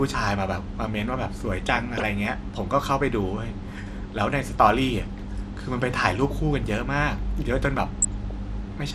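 Speech, likely passed through MP2 compression at a low bitrate throughout: starved upper sub-bands leave the sound dull, with a plainly audible gurgling, granular edge that points to around 80 kbps. DAB burbling comes from weak reception, where bit errors of a few tenths of a percent slip past error correction and corrupt sub-bands frame by frame, giving short blips of noise in single sub-bands from 1.57 to 2.02 s and 7.78 to 8.31 s.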